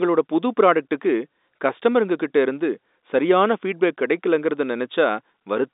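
No technical faults are audible.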